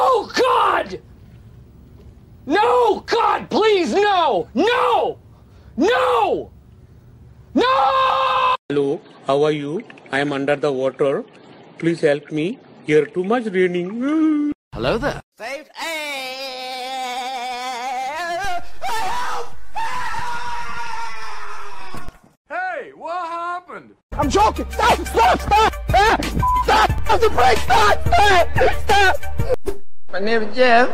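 The audio has two DC steps. At 18.45 s the zero line of the waveform jumps by an offset of about -20 dBFS. It holds, then drops back at 22.09 s. At 26.98 s it jumps again, by about -17 dBFS, and stays offset to the end of the clip. Each jump and return is heard as a low thump or click. The sound carries on unchanged throughout. A converter recalibrating, or an offset input being switched in, would cause this.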